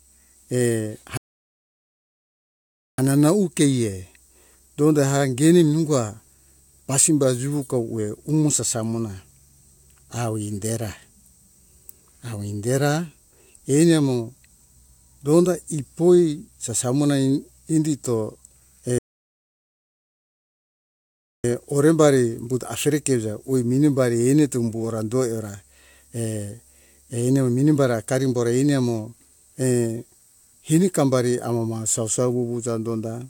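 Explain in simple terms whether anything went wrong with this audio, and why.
The speech stops twice, from 1.17 to 2.98 seconds and from 18.98 to 21.44 seconds. Each time it picks up exactly where it left off. This is a rebuffering stall. The player ran out of downloaded audio and waited for more. Nothing is missing, but about 1.8 and 2.5 seconds of silence are added.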